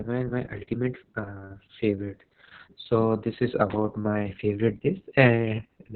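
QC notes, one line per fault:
Throughout: Opus voice compression. Speech sounds muffled, hoarse and robotic, with nothing above 4 kHz. This points to narrowband SILK coding at around 6 kbps.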